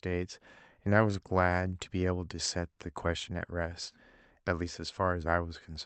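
Clock drift between sender and receiver runs through the whole speech clip: the sender's clock runs roughly 2% slow, so the receiver's jitter buffer keeps draining. Unlike network jitter or packet loss, the disturbance never comes and goes; small timing hiccups recur at uneven intervals from start to finish.

Repeated timing corrections follow from that drift between 0.08 and 5.48 s. The receiver keeps repeating short pieces to refill the buffer, adding roughly a tenth of a second overall, so the speech plays at 98% pace with faint, unevenly spaced hiccups, all stretching and never skipping, which separates them from dropouts. The Opus call path carries the audio with a band reaching up to 8 kHz.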